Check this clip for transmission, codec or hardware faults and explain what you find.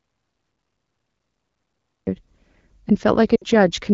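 Two faults are present in the speech. The AMR wideband (HD Voice) coding beneath them sounds consistent with a rate around 12.65 kbit/s, with only light codec colouring.

From the start of the clip to 2.07 s there is an audio dropout to silence, already under way when the clip begins. The gap is silent with no room tone. That points to a likely loss of input, such as a disconnected device, failed link or stray mute, while the encoder kept writing silence.

From 3.35 to 3.44 s there are lost AMR speech frames: a 60 ms hole, which fits three 20 ms frames failing their checksum. The decoder concealed them by repeating the last good pitch and vocal-tract settings at falling gain. The speech drops quickly to near silence, then returns weak or rough for a moment.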